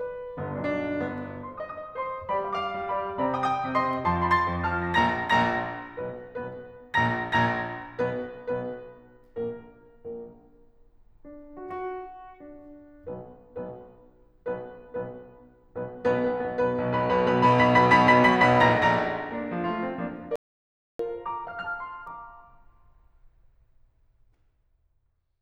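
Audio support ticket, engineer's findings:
Input path likely lost signal (link drop, device disconnect or stray mute) while the writer kept writing silence. Audio dropout to silence, 20.36 to 20.99 s, about 0.64 s: music cuts mid-flow to silence, no room tone, material in the gap gone.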